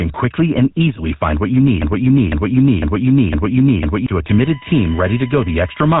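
A speech recording with three faults. Throughout, a buzzy, gravelly roughness and nothing above 3.8 kHz point to the GSM full-rate codec at 13 kbps; this grit sets it apart from simple band-limiting, which only muffles. From 1.82 to 4.07 s, right after "easily find what you", a broken-record loop repeats a 0.50 s fragment four times, identical and undecaying, unlike an echo, while the speech that should follow is lost, likely from a stalled player or stream. From 4.29 s to the end, a steady USB whine sits at 1 kHz, strongest at 2 kHz, well below the speech level. Its kilohertz pitch distinguishes it from 50 or 60 Hz mains hum.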